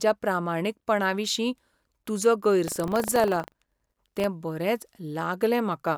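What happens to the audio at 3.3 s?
The ring buffer's writer and reader have slipped, splicing older audio into every period: buffer tearing, 2.64 to 4.26 s, a 25 Hz robotic rattle.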